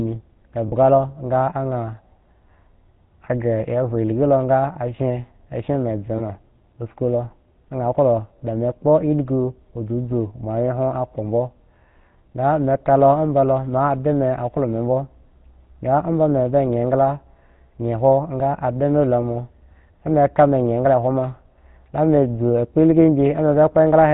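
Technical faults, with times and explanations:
Throughout: GSM full-rate codec. The speech has a plainly audible buzzy, gravelly roughness, consistent with the 13 kbps GSM full-rate coder. It rebuilds the voice from a vocal-tract model driven by a sparse, regularly spaced pulse train that keeps only every third excitation sample. On a spectrogram, energy stops sharply at 4 kHz, and the harmonics look smeared and grainy. The waveform shows coarse, pulse-driven texture rather than smooth periodic cycles.
0.68–0.74 s and 6.18–6.21 s: lost GSM frames. In both spots the sound briefly hangs on a rough, metallic ring instead of moving on. The decoder repeats the last good frame's settings to cover the gap, about 40 ms at 0.68 s (which fits two frames) and about 20 ms at 6.18 s (one frame). On a spectrogram each appears as a short, frozen, streaky band. The waveform shows a repeated pattern.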